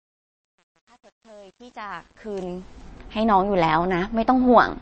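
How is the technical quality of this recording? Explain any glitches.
The recording has two clear technical faults: grainy distortion on the opening fade-in, and compression damage across the whole clip.

From 0.0 to 2.89 s the speech fades in from the start, but the fade shows truncation distortion. The gain stage kept too few bits and added no dither, which points to a resolution of only around 9 bits. While the level is low, the waveform collapses into coarse steps. The worst stretch runs from 0.0 to 2.44 s, where the sound turns gritty. Dropouts from a network would fall at random points. Here the grit follows the fade level and clears as the level rises.

Throughout the clip there is plainly audible MP3 compression, consistent with a low rate near 32 kbps. Nothing is present above 8.3 kHz, so the treble is cut off flat. The encoder also drops weak frequency lines from frame to frame, which gives a watery, swirling texture and chirpy s sounds. 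Simple low-pass filtering would only dull the sound. This fault adds that shifting, metallic churn, which is most likely caused by MP3 encoding.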